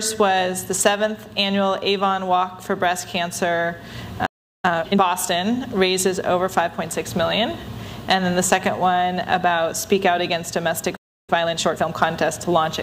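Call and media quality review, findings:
Playback stall: output silent mid-flow at 4.26–4.65 s (375 ms) and 10.96–11.30 s (318 ms). Likely player buffer underrun or blocked audio thread.

Time-compressed catch-up: audio hurried at normal pitch, 4.65–5.01 s at 2.0x and 11.30–11.92 s at 1.5x. Player cross-fading out small segments to drain backlog after each stall.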